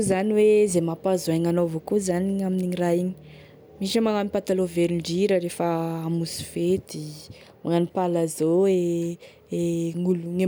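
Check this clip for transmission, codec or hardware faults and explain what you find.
No transmission, codec or hardware faults can be heard anywhere in this recording.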